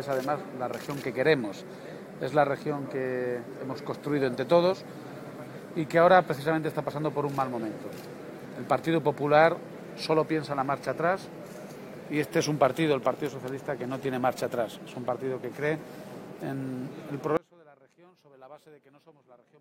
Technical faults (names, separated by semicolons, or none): audio dropout to a faint residue